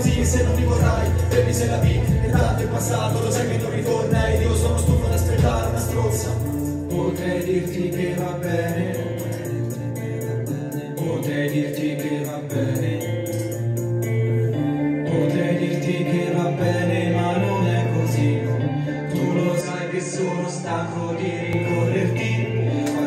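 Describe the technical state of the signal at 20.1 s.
At 20.1 s the sound is duller and somewhat quieter, with nothing above 9 kHz and a faint new noise floor well below the signal, from 19.61 to 21.53 s. The likely cause is an input switched to a poorer device, one with a narrower band and its own tone and noise.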